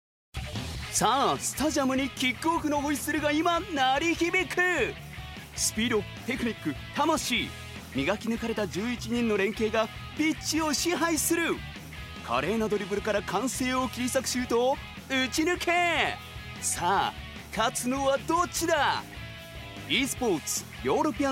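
No technical faults can be heard anywhere in the audio.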